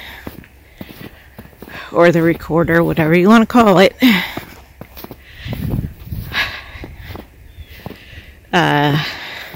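Hard clipping hits twice, from 1.99 to 2.09 s and from 2.75 to 2.78 s. The peaks there exceed what a stage can pass, by about 5 dB and then about 2 dB. Their tops are cut flat. This adds high harmonics, heard as brief harsh crackle.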